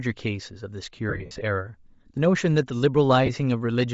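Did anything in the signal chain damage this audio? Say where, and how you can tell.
Yes. Bluetooth LC3 compression, throughout, at the codec: the speech has a plainly grainy, breathy top end, likely LC3 noise-filling at a low bitrate, around 32 kbps.

Lost LE Audio frames, scattered across 1.09–1.41 s and again at 3.26–3.30 s, on the wireless link: the speech smears into noise as the decoder repeats the last spectrum with random signs.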